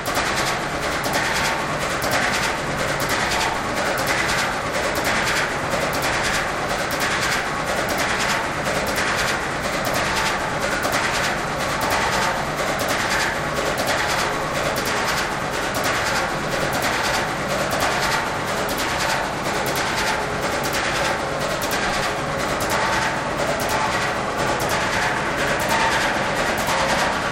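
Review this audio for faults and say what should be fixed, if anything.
There's a channel delay (doubling) running the whole way through: every sound comes back as a same-level slap about 93 ms later, because one channel lags the other, which fits a 4096-sample buffer, and the two get summed to mono. Fix it by aligning both channels before any mono fold-down.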